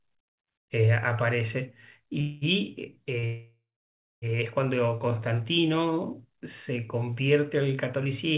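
At 2.21 s the speech hits a call audio freeze lasting until about 2.44 s. For roughly 0.2 s the last sound is carried on as a fading buzz. Then the speech resumes exactly where it stopped, so nothing is lost, but everything after it now runs about 0.2 s late. The cause is likely packets being held up in transit until the jitter buffer ran dry, with the receiver covering the gap until they arrived.

At 3.19 s there's a short stall from a late packet, lasting 34 ms up to 3.26 s. One packet wasn't there on time, so the receiver stretched the last sound to cover it. You hear a sound held a touch too long with a slight buzz, and nothing is missing afterwards.

Right after, at 3.26 s, a second, longer call audio freeze runs to 4.25 s, about a second in all. The held sound fades out, then there's about 0.59 s of silence before the speech picks up again, now about 1.2 s later than it should be.

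Throughout, the audio tops out at 4 kHz, which fits a G.711 mu-law call path at 64 kbps.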